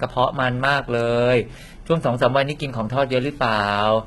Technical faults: HE-AAC compression

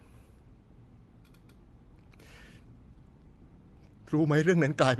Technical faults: none

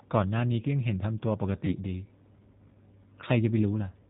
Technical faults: G.729 codec; VoIP packet loss concealed by the speech codec

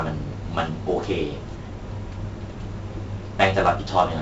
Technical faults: 4-bit ADPCM compression

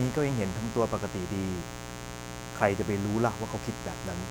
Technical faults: mains buzz

